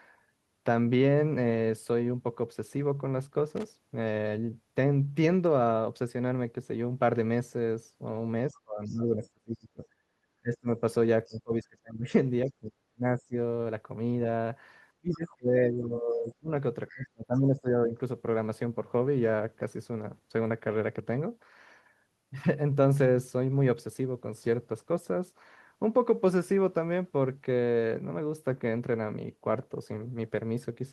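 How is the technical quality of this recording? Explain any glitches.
The recording has three kinds of glitch: a brief crackle early on, then a stretch from about 8 to 18 seconds where the speech repeatedly sinks and a faint second voice slips through.

Loose connector crackle, 3.56 to 3.67 s: an irregular scratchy burst of roughly a tenth of a second, from a worn or dirty contact rapidly making and breaking. Its ragged, random texture sets it apart from a clean digital dropout or a single click.

Speech suppressed in double talk, at 8.48–9.84, 10.41–10.81, 11.25–13.35, 14.97–16.5 and 16.93–17.98 s: the talker's speech dips by around 20 to 35 dB in pieces. The likely cause is an echo canceller that could not tell this talker from the far end's loudspeaker echo and turned both down. Unlike a network dropout, the dips are partial and come and go in chunks.

Other side's voice leaking through, at 8.86–9.26, 11.26–11.37 and 16.9–16.94 s: a faint second voice, about 25 to 30 dB below the main speech, is heard in short scraps. 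It is likely loudspeaker sound that the echo canceller did not fully remove. Unlike crosstalk, it appears only in these brief fragments alongside the dips.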